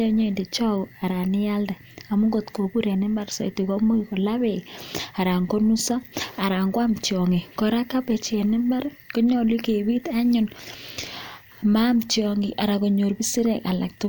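Nothing technical goes wrong anywhere in this bit of speech, so there's nothing to flag here.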